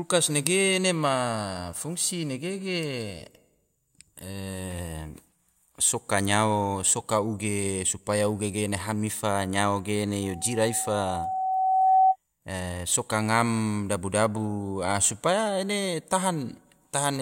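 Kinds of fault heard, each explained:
Loudspeaker feedback squeal: the microphone is picking up the loudspeaker it feeds, and at one frequency the round trip through the system gains more than it loses, so that frequency keeps amplifying itself. Here a single tone near 756 Hz appears at about 10.22 s, swells over roughly two seconds until it stands around 10 dB above the speech, and stops at 12.16 s.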